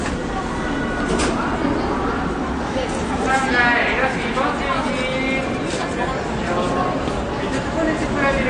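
From start to finish the sound is dull and smeared, with nothing above 9.6 kHz and a warbly fizz, likely AAC compression at something like 32 kbps.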